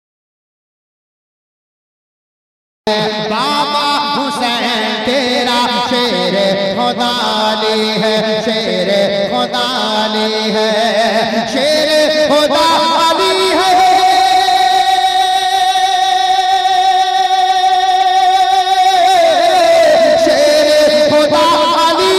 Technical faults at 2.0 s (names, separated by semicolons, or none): audio dropout to silence